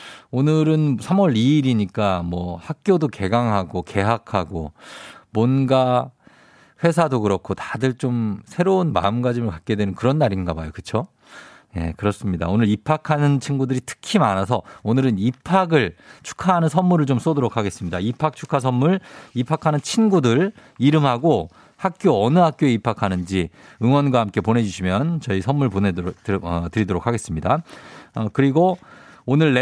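A speech recording with no technical faults to report. Nothing in it calls for a time or a cause.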